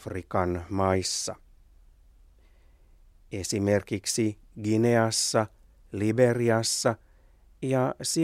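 No technical faults can be heard anywhere in this speech recording.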